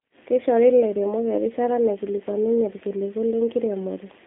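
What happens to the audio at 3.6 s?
G.729 coding is present at 3.6 s as throughout: speech rebuilt from a vocal-tract model and sparse pulses, fitting 8 kbit/s, sounds rough and synthetic, with nothing above 3.7 kHz.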